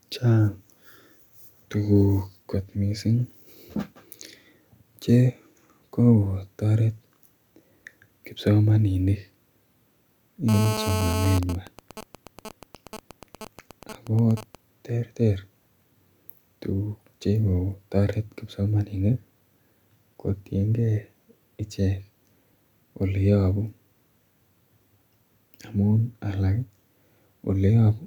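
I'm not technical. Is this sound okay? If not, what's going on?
No, not entirely. From 10.49 to 11.39 s there is a harsh, raspy buzz over the speech. This is GSM phone buzz. A 2G mobile phone near the recording gear was in a call. Its radio sends pulses about 217 times a second. The audio electronics picked those pulses up and turned them into sound. So you hear a rough 217 Hz drone with a gritty edge. It is fairly loud, and it has nothing to do with the speech itself.

Right after, from 11.43 to 14.55 s, the sound changes to a pattern of ticks and buzzes. This is GSM signalling bursts. The same phone was still in the call, but its user had gone quiet. The phone then sends only brief groups of radio pulses. The audio circuit picked these up too. You hear even ticks with a longer buzz twice a second. It is quieter than the buzz before it.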